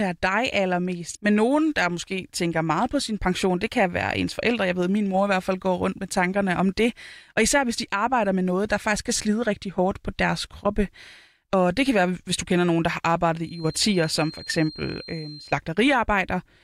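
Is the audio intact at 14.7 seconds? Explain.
No. At 14.7 seconds the speech carries a feedback whistle, a thin, steady tone at 4.2 kHz lasting from 13.38 to 15.60 s, just after "kender nogen der har". It sits roughly 20 dB below the speech and swells and fades slowly in level. The likely cause is a loudspeaker-to-microphone loop held right at the edge of feedback. On a spectrogram it shows as a narrow horizontal line at 4.2 kHz; the waveform barely shows it.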